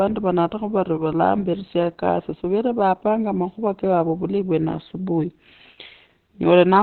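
Opus compression runs through the whole speech clip, from start to finish. Nothing reaches above 4.2 kHz, so the speech sounds boxed-in and muffled, with a hoarse, rough texture from heavy coding damage. The likely cause is an encoder starved of bits that fell back to its narrowband speech mode, discarding the upper band entirely and coarsely modelling what remained. The dull, thin timbre fits a rate around 12 kbps.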